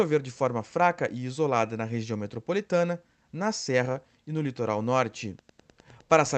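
Wi-Fi interference enters this speech recording at 5.32 s, just after "e no litoral", and continues to the end. It is a steady tick every 102.4 ms, roughly 35 dB below the speech, produced when a nearby Wi-Fi radio's beacon bursts are rectified by the audio circuitry into audible clicks. The speech arrives through a call path whose top end stops near 8 kHz, which fits Opus coding at around 32 kbps.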